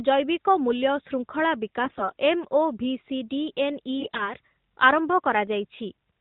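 Around 1.84 to 2.13 s, and again from 3.99 to 4.34 s, the speech turns hoarse and gargly. Those are AMR bit errors: roughly a tenth of the weakly protected bits got flipped, so pitch and level hold but the excitation pulses and spectral detail scatter into scratchiness, all within the narrowband mobile codec's 4 kHz ceiling.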